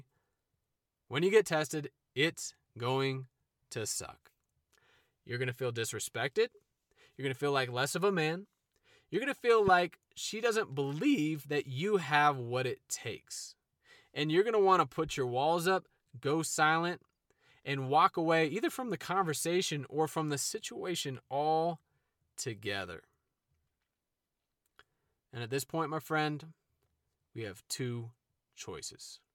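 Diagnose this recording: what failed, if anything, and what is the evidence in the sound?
A loud pop sits on the speech from 9.68 to 9.70 s, a single thump peaking about 10 dB above the signal while the speech continues unbroken beneath it. That points to the analogue wiring stage, likely a voltage pulse from a plug, switch or static discharge. A digital dropout would interrupt the speech instead.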